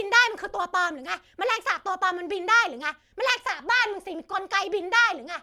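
From start to finish the speech has a swirly, hollow quality, with consonant onsets smeared rather than crisp. That's generation loss, and the likely cause is the audio going through MP3 encoding about four times over. Each pass re-quantises on a shifted frame grid, so the noise and spectral gaps stack up. The result sounds rougher than a single encode at a rate around 130 kbit/s would.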